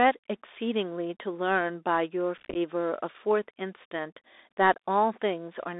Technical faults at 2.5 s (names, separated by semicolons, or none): Bluetooth CVSD headset codec; unconcealed Bluetooth headset packet loss